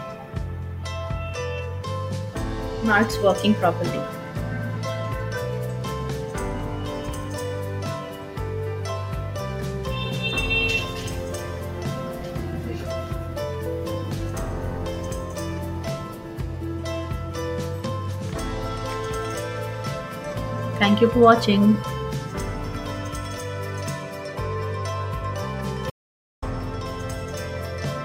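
At 25.90 to 26.42 s, an audio dropout to silence removes about 0.52 s of sound, likely a lost input link; the waveform goes flat and the spectrogram shows a blank gap.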